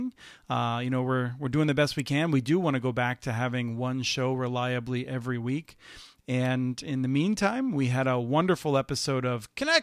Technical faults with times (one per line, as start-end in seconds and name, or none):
2.00 electrical switching spike
6.45 electrical switching spike